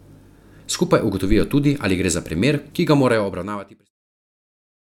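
A speech clip with no technical faults to report.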